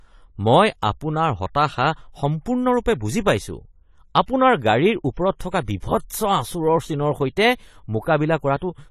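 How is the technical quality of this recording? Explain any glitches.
The main problem runs through the whole clip: audible AAC compression damage. Nothing gets through above about 14.1 kHz, and the speech sounds dull and smeared, with a warbly, fizzy edge on sibilants. That's likely an AAC-LC encode at a low rate, something like 32 kbps, where the encoder cuts the top band and coarsely quantises what's left.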